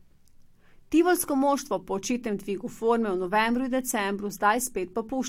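No technical faults can be heard in this speech recording. The signal holds steady throughout, with no audible break or disturbance at any point.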